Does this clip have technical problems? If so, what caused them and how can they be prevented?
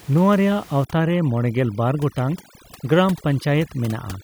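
Yes. Overdone noise removal runs from 0.85 s to the end at 4.23 s. The noise reduction was set too strong against room noise about 22 dB below the speech, so bands near its noise estimate are cut. That leaves twinkling specks over a lowered background. Using a gentler reduction amount, or recording somewhere quieter, would prevent this.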